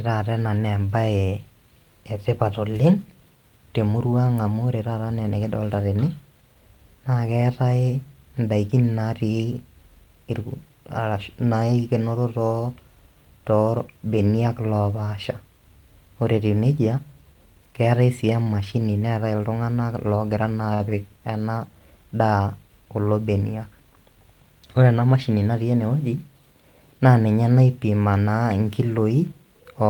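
A speech clip with two short stalls from a late packet: just after "keetae sii" at 18.43–18.49 s, and at 20.74–20.83 s. Each time a packet arrived late and the receiver stretched the last sound, by 26 ms and 57 ms, then resumed with nothing lost. On a spectrogram the held harmonics run flat and smeared, with a repeating, slightly buzzy waveform.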